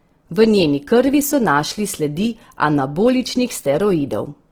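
Throughout the speech, a grainy, rough texture sits on the voice, most likely from Opus compression at a low bitrate around 16 kbps. Bands starved of bits get filled with folded or noise-like energy, so a spectrogram shows smeared, speckled upper harmonics rather than holes, with content reaching about 20.4 kHz.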